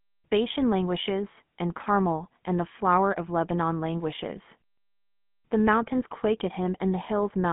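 Throughout, the speech has a plainly buzzy, gravelly roughness and nothing above 3.7 kHz: the GSM full-rate codec's pulse-driven vocal-tract model, fitting 13 kbps.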